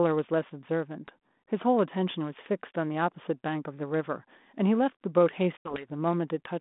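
Packet loss on the ADPCM call, from 5.57 to 5.87 s: about 80 ms of packets, roughly seven, never arrived and were filled with silence. The decoder's predictor and step size drifted from the sender's, so after the abrupt gap the 32 kbit/s G.726 speech resumes with brief, slight distortion before settling.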